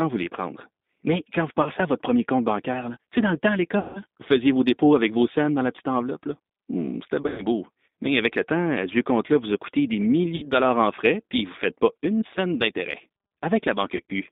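Throughout the speech the G.729 codec is plainly audible: the band is confined to roughly 200 Hz to 3.7 kHz, and the 8 kbit/s coder rebuilds each 10 ms frame from a spectral-envelope filter, a pitch predictor and a handful of pulses, leaving the voice rough, slightly synthetic and dull, with a warble on breathy or noisy sounds.

VoIP packet loss concealed by the speech codec then breaks in five times. At 1.62 s, after "quand vous", about 40 ms is missing. At 3.79 s, after "dans le temps à", a 160 ms gap is the longest. At 7.22 s there is 120 ms of loss scattered over 160 ms, with a run of up to 100 ms. At 10.36 s, after "vous a coûté des", 60 ms is lost. At 13.97 s there is 80 ms scattered over 140 ms. In each gap the decoder keeps repeating its last pitch and filter at falling gain, so the sound smears into a buzzy, fading tone. The speech stays weak and distorted for a short while after the stream resumes, before "à votre premier compte", "vous faisiez vos dépôts" and "dollars en frais puis".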